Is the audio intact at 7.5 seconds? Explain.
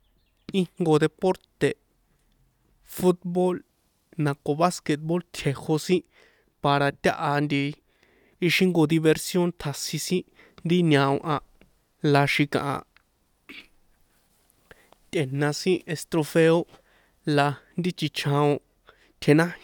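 Yes, the speech at 7.5 seconds plays through intact, with no dropout, click, distortion or other fault at that moment.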